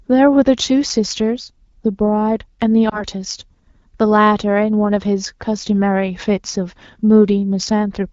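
At 2.89 to 3.04 s there is a lost AMR speech frame event. A checksum failure on the radio link left the decoder without valid data, so it repeated the previous pitch and vocal tract parameters at reduced gain. The result is a brief dip or warble, which fits a single lost 20 ms frame, before the sound recovers weak for a moment. Around it, the AMR wideband (HD Voice) coding at 12.65 kbit/s shows only light codec coloration.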